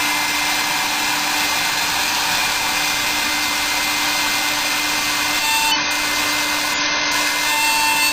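At 1.30–1.35 s, 3.25–3.29 s, 5.72–5.77 s and 6.74–6.79 s, damaged data in a compressed stream makes the decoder misread frames and resync, giving short glitches: brief broadband vertical smears on a spectrogram, with abrupt waveform discontinuities.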